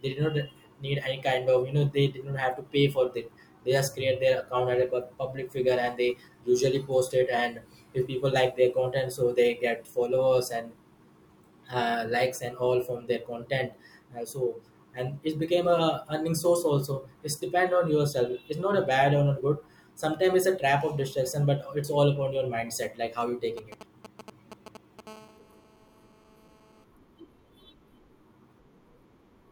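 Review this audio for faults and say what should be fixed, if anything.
From 23.58 to 25.01 s, GSM signalling bursts: a nearby 2G phone's intermittent radio bursts, rectified by the audio circuit, gallop as a dit-dit-dit of brief 217 Hz buzzes, fairly loud relative to the speech. The grouped, stop-start rhythm distinguishes them from a continuous buzz.

From 25.07 to 26.84 s, GSM phone buzz: a phone in a call transmitting 217 times per second produces a steady, raspy 217 Hz buzz about 28 dB below the speech. Its hard, harmonic-rich texture distinguishes it from smoother 50 or 60 Hz mains hum.

Keep phones switched off or in flight mode near the recording chain, and use shielded cables with RF filtering on the inputs.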